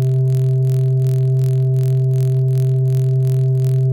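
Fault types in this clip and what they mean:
block size mismatch (padded): each block of music arrives slightly shorter than the next stage reads, so a sliver of zeros ends every block. This adds a steady 43.1 Hz buzz, fitting a 1024-sample read, and a barely noticeable 0.999x slowdown. Waveforms show tiny regular notches; spectrograms show evenly spaced vertical lines.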